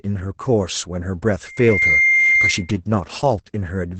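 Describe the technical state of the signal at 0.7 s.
At 0.7 s, as throughout, Opus voice compression cuts everything above 8.8 kHz and coarsely codes the excitation, giving a hoarse, slightly robotic muffle, which fits roughly 12 kbps, unlike a plain low-pass filter.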